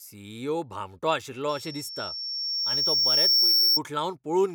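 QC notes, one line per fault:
1.49–3.80 s, loudspeaker feedback squeal: a pure tone near 5.5 kHz swells over roughly two seconds until it sits around 10 dB above the speech. The microphone is re-amplifying its own loudspeaker, and at that frequency the loop gain exceeds one, so it grows on itself.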